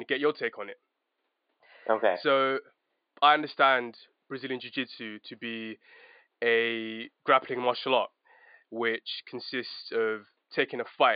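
Nothing in this speech recording points to a technical problem, and the faint room noise sitting about 52 dB under the talking is just the space the microphone was in.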